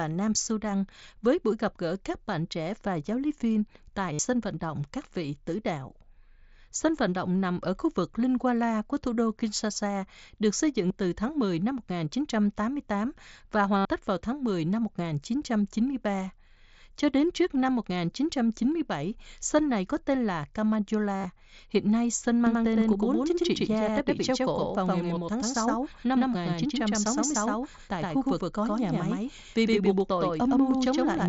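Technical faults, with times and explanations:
4.13 to 4.19 s, 10.88 to 10.90 s, 13.78 to 13.85 s and 21.13 to 21.25 s, concealed Bluetooth headset packet loss: brief buzzy, held tones replace the speech, with a slight warble as real audio resumes. Lost headset packets were filled by repeating the best-matching recent waveform. The gaps last 60 ms, 22.5 ms, 75 ms, and 90 ms in total spread across 120 ms, with a longest run of 45 ms.
22.47 s to the end, doubled audio track: a dry, full-band copy of the speech follows about a tenth of a second behind at roughly equal level. It starts abruptly and has no room decay. The likely cause is the same audio being captured again through a slower path, or two out-of-step copies being mixed.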